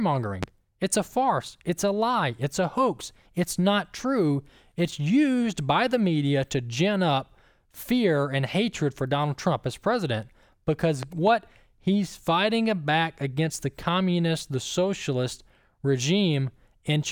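Right at the start, around 0.43 to 0.46 s, there's a loud pop sitting about 15 dB above the speech. Then between "as president because" and "he's fighting back against", from 11.03 to 11.30 s, you get a double pop, about 10 dB up. The likely culprit is a voltage spike from a plug, switch or static getting into the chain, and the speech carries straight on underneath each thump.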